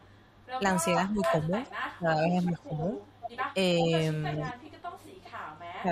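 Right from the start, 0.00 to 0.48 s, there's a very faint echo leak, a ghost copy of the speech trailing by about 400 ms. It's likely a loudspeaker on the far end whose echo canceller let some pickup slip back. It returns much louder from 1.21 to 1.97 s, only a little below the speech, then sits somewhat quieter from 2.69 to 3.53 s and 4.36 to 5.62 s, still holding that same 400 ms lag.

Overlapping that, from 0.59 to 2.94 s, the speech gets suppressed in double talk. It dips in pieces totalling around a second, at worst by about 10 dB. That's likely the canceller mistaking the talker for echo while both sides overlap and ducking everything. Smaller dips follow at 3.54 to 3.92 s, a shallow one, then brief, deeper cuts of about 15 dB at 4.53 to 4.59 s and 5.82 to 5.90 s.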